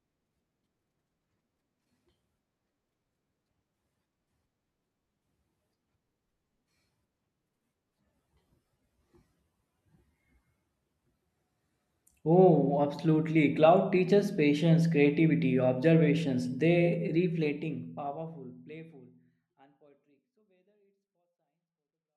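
No technical faults are audible.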